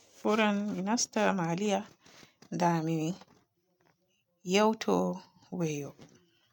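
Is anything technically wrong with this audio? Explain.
No, the speech signal shows no technical faults that a listener can pick out.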